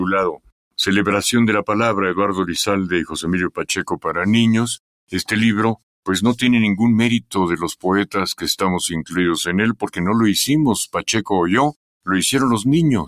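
A speech-tuned noise suppressor was left running on this sound, treating steady parts as noise, so the level pumps and wavers by a few decibels throughout. It clamps hardest at 0.32 to 0.52 s, 3.5 to 4.05 s and 9.74 to 9.98 s, where the sound drops by about 20 dB.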